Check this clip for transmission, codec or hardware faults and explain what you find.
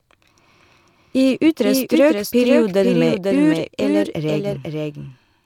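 One fault is present: a doubled audio track, running through the whole clip. A second full-band copy of the speech trails the original by about half a second, a few decibels quieter. Likely cause is a slower capture path recording the same audio again. It sounds like a dry, flat echo. There is no decay or room colour.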